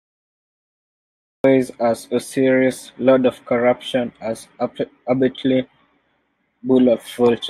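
The clip opens with digital silence from 0 to 1.44 s. At 1.44 s the speech appears abruptly, already under way. This is a cut-off start. The capture or stream began late, so the first part of the utterance was never recorded. The audio enters in the middle of a sound rather than at its beginning. There is no natural attack and no fade-in. The silence ends in a hard step straight into the speech.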